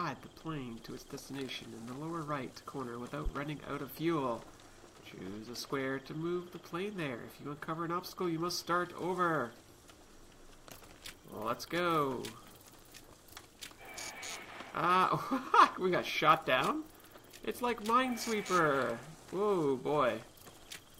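At 3.26 s a loud pop occurs, two sharp pulses within about 0.14 s and ending by 3.39 s, peaking roughly 10 dB above the surrounding sound, which continues beneath them. The likely cause is a voltage step from a plug, switch, static or driver glitch.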